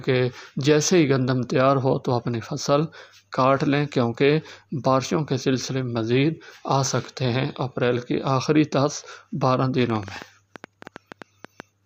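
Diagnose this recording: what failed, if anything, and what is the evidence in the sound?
What failed is a train of clicks from 9.90 to 11.61 s: around fifteen near-identical pops at roughly 8.2 per second, unevenly spaced, peaking about 5 dB above the sound. Same-shaped impulses like that likely point to interference pickup on the analogue wiring.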